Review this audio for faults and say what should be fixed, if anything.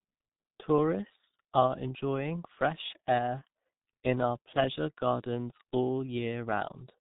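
The whole speech clip carries G.723.1 codec damage: nothing above 3.8 kHz, and long 30 ms frames smear consonants into a muffled, hoarse blur, which fits roughly 6 kbit/s. Route the call over a wideband codec like G.722 or Opus instead.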